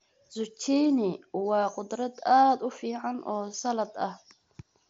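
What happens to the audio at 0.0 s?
Nothing goes wrong at 0.0 s: the speech comes through intact there, carried over the Bluetooth mSBC headset link as expected.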